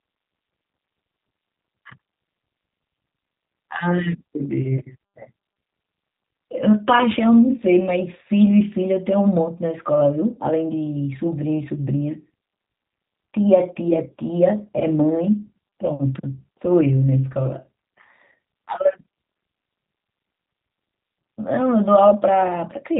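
From start to finish the speech carries G.729 codec damage. It is plainly audible. Nothing passes above about 3.8 kHz, so the sound is muffled. Each short frame is rebuilt from a filter, pitch and a few pulses. That leaves a rough, synthetic edge, which fits an 8 kbit/s stream.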